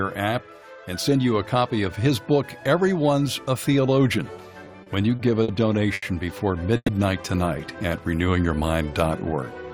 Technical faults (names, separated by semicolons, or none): repeated stalls (stutter); short stall from a late packet; call audio freeze